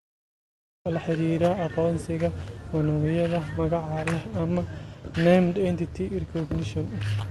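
This speech clip has a cut-off start: digital silence runs to 0.86 s, then the audio begins abruptly mid-sound, with no natural attack, as if the stream began late. There is also clock drift between sender and receiver throughout: the sender's clock runs roughly 2% slower, so the receiver's jitter buffer keeps draining and must compensate. This shows up as repeated timing corrections from 1.10 s to 6.39 s, where short pieces are repeated, playing at 98% speed and adding roughly a tenth of a second overall as small, unevenly spaced edits. All of this passes over a call path whose Opus coding tops out around 12 kHz.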